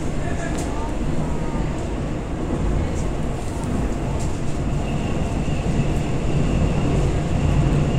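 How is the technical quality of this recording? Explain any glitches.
The recording has one glitch, a single loud pop near the start. A loud pop occurs from 0.55 to 0.57 s. It is likely caused by a sudden voltage step or pulse, from a plug, switch, static discharge or driver glitch, entering the signal chain. It is heard as one sharp pop, a few decibels above the surrounding audio, which carries on underneath.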